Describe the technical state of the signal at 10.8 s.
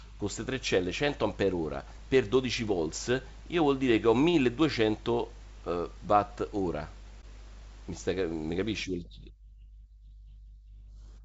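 At 10.8 s the speech is intact, coming through G.722 wideband telephone coding at 64 kbit/s with nothing above about 7.7 kHz.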